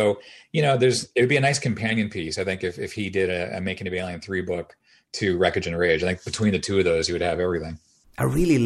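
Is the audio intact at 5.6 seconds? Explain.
Yes, at 5.6 seconds the speech plays through cleanly, with no dropout, click, distortion or other fault audible at that moment.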